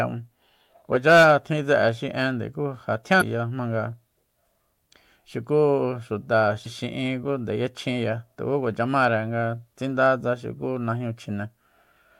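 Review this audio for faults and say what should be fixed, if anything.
Two short bursts of damaged data in a compressed stream occur in this speech clip, at 3.18 to 3.22 s and 6.63 to 6.67 s, each lasting about 40 ms. At both points the encoded bytes reaching the decoder are wrong, so it cannot parse the affected frames, drops sync and resumes only at the next valid frame header, leaving a brief synthetic blip in place of the speech. To prevent this, verify file checksums after transfer and carry the stream over a transport with error detection and retransmission.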